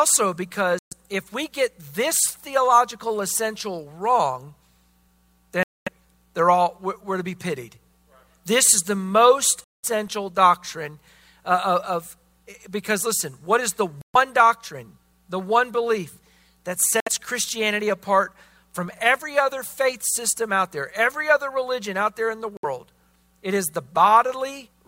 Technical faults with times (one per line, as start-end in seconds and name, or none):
0.79-0.93 Bluetooth dropout
5.63-5.89 Bluetooth dropout
9.64-9.85 Bluetooth dropout
14.01-14.16 Bluetooth dropout
17.00-17.09 Bluetooth dropout
22.57-22.65 Bluetooth dropout